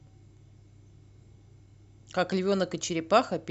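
Speech recording, no technical faults detected on listening.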